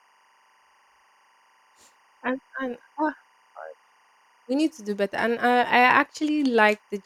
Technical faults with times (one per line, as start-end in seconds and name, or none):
0.00-7.06 timecode bleed